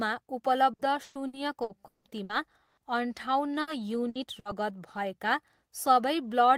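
From 0.73 to 2.80 s the speech shows repeated packet loss, giving a robotic sound. Seven gaps, the longest 180 ms, are each patched by extending the preceding audio, concealing roughly a third of the stretch and leaving it choppy, with pieces missing.

A burst of packet loss follows at 3.61 s, then at 4.09 s and 4.39 s. Each time about 60 ms goes missing. The last sound is held and faded, heard as a brief buzz or hiss, before the speech resumes further on.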